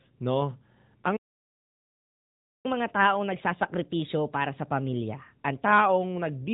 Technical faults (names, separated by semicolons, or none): AMR narrowband mobile codec; playback stall; catch-up at higher speed